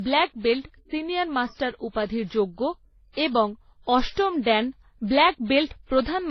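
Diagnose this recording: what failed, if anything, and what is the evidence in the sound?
Codec stage: the speech stays dull throughout, with nothing above 5.9 kHz and mixed, layered artefacts. That's likely transcoding between lossy codecs, each pass compounding the last.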